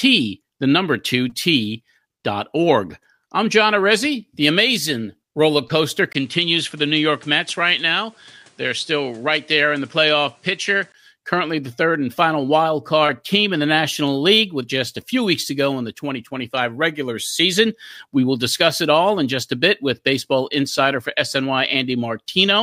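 From 6.13 to 10.94 s the recording likely switched to a poorer input device. A 20 ms gap marks the switch, then nothing reaches above 11.1 kHz and a new, faint noise floor sits underneath while the level stays much the same, before the fuller sound returns.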